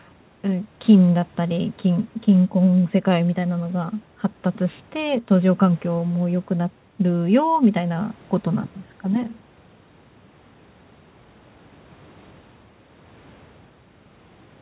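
Nothing faulty to report in the speech: the band stops at 4 kHz as expected of a narrowband call path, consistent with G.711 mu-law coding at 64 kbps, and the lowest bass is trimmed by the call's microphone processing as normal.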